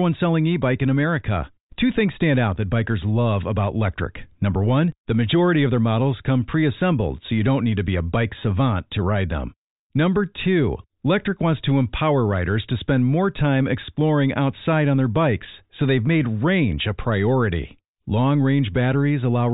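Nothing in this recording stands out as a technical fault at any point, so there's nothing to flag here.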